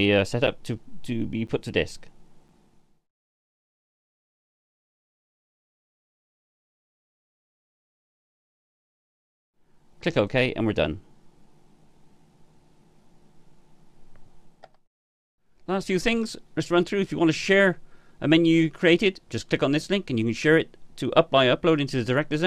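At 0.47 s, 1.47 s and 2.48 s the sound drops out briefly. Each is a gap between stream segments. Its edges are hard, and it lasts about 7 to 11 ms. The gaps recur once a second, which fits 1-second segments. Each segment's time stamp starts slightly after the previous one ends. The player fills that space with silence. Nothing is lost. A few milliseconds of silence are simply added, heard as a tiny, regular hole.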